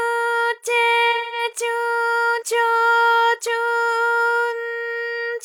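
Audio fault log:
1.12–1.44 s, AAC frame loss with concealment: for about 0.21 s the sound turns into a smeared, noisy or phasey patch. Several consecutive encoded frames never reached the decoder, so it rebuilt the gap from the last good spectrum, reusing that spectral shape with randomised signs or smoothed energy instead of the real content. The length of the gap points to roughly five lost AAC frames.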